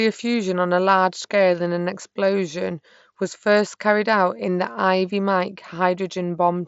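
No technical faults can be heard anywhere in this speech clip. It has passed through a Bluetooth mSBC headset link, which keeps the speech band up to about 8 kHz, with a light grainy texture on louder sounds and the weakest upper bands occasionally dropping in and out.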